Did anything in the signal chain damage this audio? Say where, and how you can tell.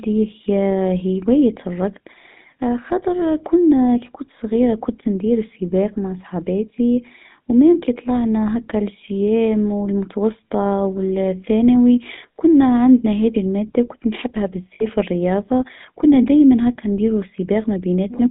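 Yes. Throughout the speech there is a gritty, buzzy roughness and a muffled top, with the band confined to roughly 150 Hz to 3.7 kHz. This points to the codec stage, specifically the GSM full-rate codec. It encodes the voice as a vocal-tract filter excited by a sparse, regularly spaced pulse train, discarding most of the excitation detail. That thinned excitation produces the audible gravelly buzz, and the character fits the 13 kbps full-rate coder.

At the network stage, lost GSM frames cause a short metallic, ringing smear from 14.74 to 14.85 s, right after "هذي الماده وكنت نحبها". The receiver concealed the missing data by reusing the last good frame's filter and excitation settings, so the sound briefly freezes into a rough tone rather than dropping out. The roughly 60 ms of concealment fits about three lost 20 ms frames.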